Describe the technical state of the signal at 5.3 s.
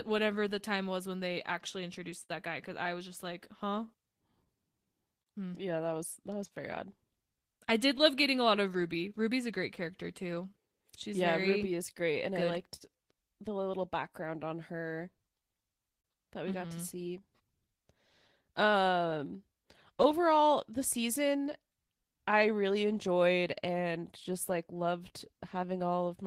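At 5.3 s the speech sits inside a stretch affected by clock drift between sender and receiver. The sender's clock runs roughly 4 percent slow, so the receiver's buffer keeps draining. On a waveform this shows as no single event, only small timing hiccups recurring at uneven intervals.

Repeated timing corrections run from 0.12 s to 26.23 s. The receiver stretches the audio to about 98 percent speed, inserting repeated fragments that add roughly 0.7 s overall. These are heard, if at all, as faint hiccups or a wobbly tempo. A spectrogram shows short duplicated slices, unevenly spaced.

Scattered short gaps occur between 0.18 s and 16.06 s. About twenty small holes, none longer than about 50 ms, were patched by extending the preceding sound. Each causes a brief tick or smear. On a spectrogram they appear as short flattened, frozen patches of harmonics.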